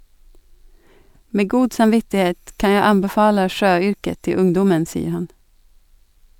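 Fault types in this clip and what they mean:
No technical faults can be heard in the recording. Nothing in the audio points to a problem anywhere along its path.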